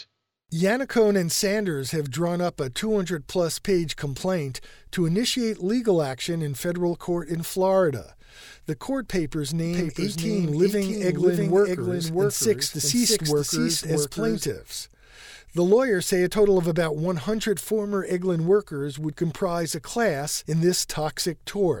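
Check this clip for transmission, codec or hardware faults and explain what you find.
One fault stands out: a doubled audio track from 9.65 s to 14.47 s, starting just after "court papers". A second full-band copy of the speech runs about 0.7 s behind the original and a few decibels quieter. It is likely caused by the sound being captured twice through a slower second path. Unlike acoustic echo or reverb, the copy carries no decay or room colour, never repeats further, and switches on and off abruptly at both ends.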